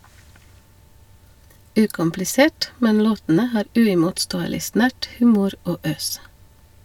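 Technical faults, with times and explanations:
No technical faults heard anywhere in the speech.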